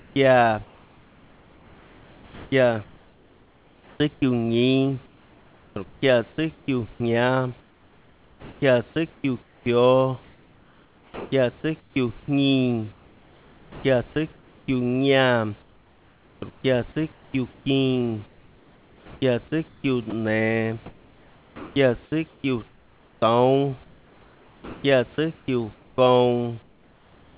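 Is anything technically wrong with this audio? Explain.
Yes. The clip is speech carried over a call path whose G.711 A-law coding removes everything above 4 kHz. Its faults are all in how the pauses and quiet stretches are handled.

Comfort noise in place of the background is heard from 0.0 to 4.22 s, 5.06 to 6.68 s, and 15.62 s to the end. The sender likely stopped transmitting during pauses, so the receiver generated a steady, featureless hiss in place of the real room background. The room noise sits about 32 dB below the speech. The synthetic noise has no texture and changes character abruptly when speech resumes, which separates it from ordinary noise reduction.

Sound dropped by the voice detector occurs at 4.14 to 4.22 s and again at 20.10 to 20.12 s. The detector likely mistook part of the sound for background. About 40 ms of sound is lost in the first case and 20 ms in the second, replaced by that same flat noise. 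This is a single clean gap, not a run of repeated losses.

Sound chopped by the voice detector spans 7.6 to 14.68 s. Transmission likely toggled on and off repeatedly, so about 4 s in total became comfort noise. Quiet syllables and word edges vanish. The smooth fill noise is what distinguishes it from packet-loss dropouts, which leave silence or smeared repeats rather than smooth noise.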